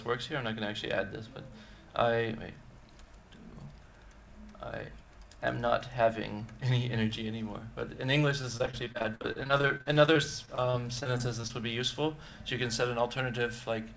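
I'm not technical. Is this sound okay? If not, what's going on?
No. Between 8.42 and 11.51 seconds, the call connection suffered repeated packet loss (robotic sound). Small chunks of audio kept going missing or arriving too late, and the system covered each hole by stretching out the last bit it had. The gaps were short, none longer than about 51 milliseconds, but they came one after another, so about a fifth of that stretch is patched-in sound. It comes out choppy, with pieces missing.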